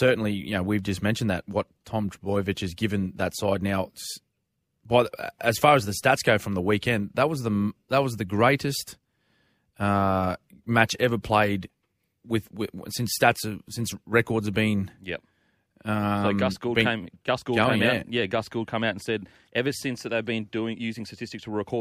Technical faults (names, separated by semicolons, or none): none